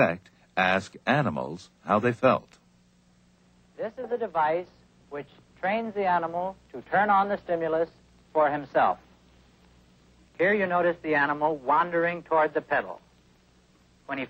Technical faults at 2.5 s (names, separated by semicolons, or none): chunks out of order